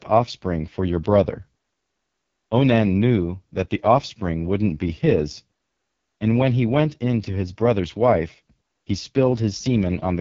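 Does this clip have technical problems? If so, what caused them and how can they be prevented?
Yes. Throughout, the speech carries heavy AMR wideband (HD Voice) codec damage: a rough, raspy texture with nothing above about 7.3 kHz, which fits the codec's lowest 6.6 kbit/s mode starving its pulse-excited vocal tract model. Prevent it by encoding at 12.65 kbit/s or higher.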